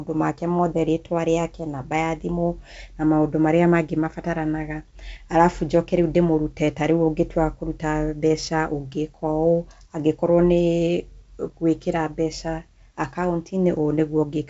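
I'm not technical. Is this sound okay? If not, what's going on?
Yes, no faults to report.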